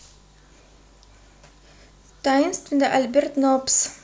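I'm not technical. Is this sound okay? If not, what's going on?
Yes, this sound is okay. There's nothing here that needs fixing.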